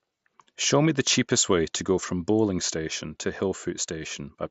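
No technical faults occur anywhere in this speech clip.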